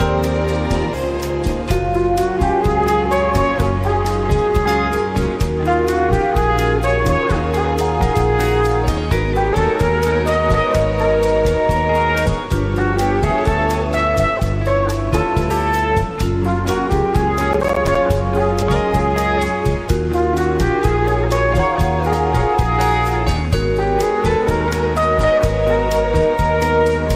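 Compressed frames skipped: whole 24 ms frames of the encoded stream never reach playback, so the audio jumps ahead by roughly 100 to 300 ms at 0.93, 4.65, 8.13, 9.52, 12.25, 15.49, 18.61 and 22.12 s. Processor overload crackle: between 17.53 and 17.95 s the processor repeatedly misses its deadlines for buffers of about 10 ms, leaving a handful of silent gaps with hard edges. These are heard as a gritty crackling burst riding on the sound.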